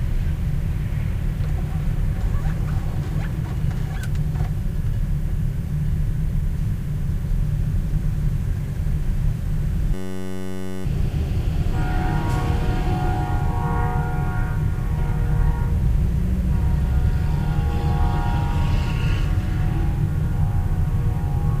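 A system hang loop interrupts this recording of sounds from 9.94 to 10.85 s. The computer or audio driver stalled while the sound hardware kept replaying the same tiny stretch of its ring buffer, a segment about 10.67 ms long, which fits a 512-sample buffer, some 85 times over. Because the loop is so short, it comes across as a steady buzz at 93.8 Hz, and roughly a second of the real audio is lost.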